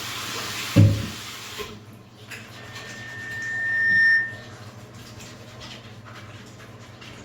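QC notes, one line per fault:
2.57–4.57 s, loudspeaker feedback squeal: a pure tone near 1.8 kHz swells over about a second and a half to roughly 10 dB above the sound, then stops. The microphone hears its own loudspeaker, and loop gain above one at that frequency lets the tone grow.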